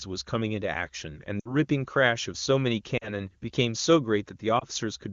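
Speech over AMR wideband, with lost AMR speech frames at 1.40–1.55 s, 2.97–3.09 s and 4.59–4.64 s, the longest fitting three lost 20 ms frames. Unlike a hard dropout's click or dead cut, the decoder stretches the last voice shape with falling gain, so sound smears and fades.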